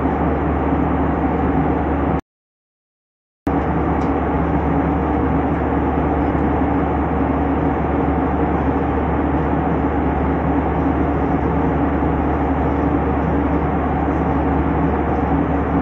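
At 2.20 s the audio cuts to silence mid-flow and stays silent for about 1.27 s, resuming at 3.47 s. This is a playback stall, likely the player starving for data or its output thread being blocked until it recovered.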